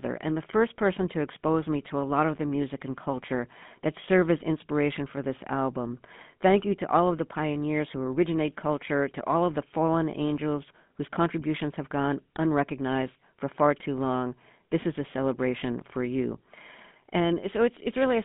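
From start to finish, the speech carries GSM full-rate codec damage. The channel passes roughly 150 Hz to 3.5 kHz, so everything above is missing. The codec rebuilds the voice from a vocal-tract model driven by sparse pulses. That leaves a plainly audible buzzy, gravelly roughness, which fits a 13 kbps stream.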